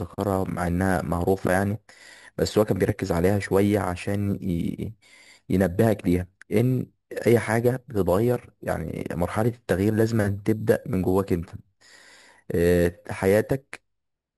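A speech recording with imaging from sample-and-hold upsampling throughout. The sound was raised to a higher rate by repeating each sample without a smoothing filter, which fits a move from 12 kHz to 44.1 kHz. Mirror copies of the speech spectrum sit above the original band. The first fills 6 to 12 kHz, about 22 dB below the speech. It is heard as a metallic fizz that tracks the speech level, moving opposite to the pitch.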